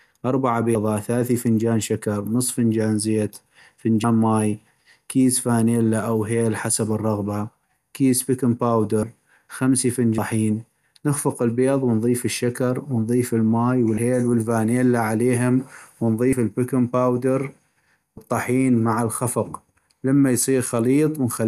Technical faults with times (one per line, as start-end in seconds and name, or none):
0.75 compressed frames skipped
4.03 compressed frames skipped
9.03 compressed frames skipped
10.18 compressed frames skipped
13.97 compressed frames skipped
16.32 compressed frames skipped
18.17 compressed frames skipped